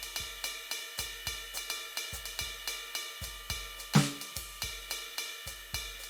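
Music, with no audible technical faults anywhere in the clip.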